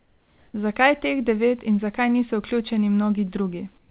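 Speech, carried over a call path whose content stops at 4 kHz, as G.711 A-law coding would leave it. From 0 to 0.54 s and again from 3.78 to 3.9 s, the real background gives way to a steady, featureless hiss about 2 dB quieter. This is likely comfort noise in place of the background: the receiver synthesises it while the sender's voice detector has paused transmission. A noise gate would drop these stretches to silence. Here they keep a smooth noise bed instead, one that lacks the detail of the genuine background around it.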